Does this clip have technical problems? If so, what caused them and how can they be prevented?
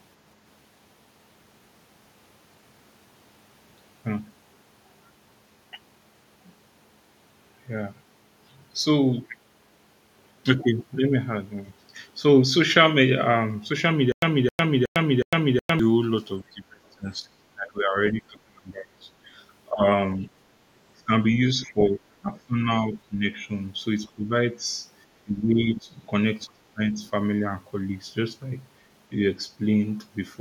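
Yes. From 14.12 to 15.79 s there is a stutter with silent gaps: a 266 ms fragment of speech repeats four times, each followed by 102 ms of digital silence, on a steady 368 ms cycle. The likely cause is a stalled player or stream replaying its last buffer on each retry while new audio failed to arrive. Larger jitter buffers and a decoder that conceals gaps instead of looping stale data prevent it.

Speech suppressed in double talk makes the talker's speech dip sharply or drop out in pieces at 16.42 to 19.10 s (the deepest drop is about 25 dB), 19.69 to 19.83 s, 20.96 to 21.11 s, 21.62 to 23.24 s, 24.14 to 24.61 s (about 15 dB), 25.23 to 26.00 s and 26.47 to 26.80 s, with the remaining drops around 20 dB. The echo canceller likely misread overlapping talk as echo and attenuated the near-end voice. A double-talk-robust canceller with less aggressive suppression, or a headset, avoids this.

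From 26.94 to 27.08 s the other side's voice leaks through as a brief, faint scrap, roughly 35 dB below the talker. It is likely residual loudspeaker echo that the canceller did not fully remove from the microphone. Headphones, lower speaker volume and better echo-canceller convergence prevent it.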